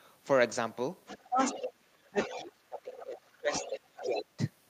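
A second, fainter voice keeps surfacing under the main talker in this speech clip, at 1.06 to 1.59 s, 2.07 to 2.41 s, 2.95 to 3.06 s, 3.52 to 3.70 s and 3.96 to 4.23 s. It mostly sits around 10 dB below the talker and drops to roughly 20 dB below in the short burst near 3 s. This is the other side's voice leaking through, likely far-end audio from the talker's loudspeaker that the echo canceller failed to strip out of the microphone signal. Around those same moments the talker's own voice sags and breaks up. It dips briefly by about 20 dB at 1.23 to 1.39 s, then repeatedly by up to about 25 dB across 1.56 to 3.53 s (roughly a second and a half of it in total) and again at 3.69 to 4.40 s. This is speech suppressed in double talk, likely the echo canceller attenuating everything while both sides spoke at once because it could not tell the talker apart from the loudspeaker echo.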